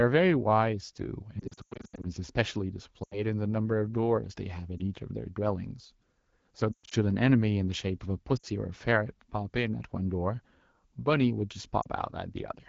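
Speech carried over AMR wideband, which stays clear between the faults. The defect is lost AMR speech frames. The decoder bridges each gap by repeating the last good pitch and vocal tract settings at falling gain. The worst stretch is 1.40 to 2.06 s, with scattered dropouts and runs up to 100 ms that fade to near silence, and 6.72 to 6.94 s holds a 120 ms run that fades to near silence. Shorter dropouts occur at 3.03 to 3.22, 4.78 to 4.81, 8.37 to 8.46 and 11.81 to 11.87 s.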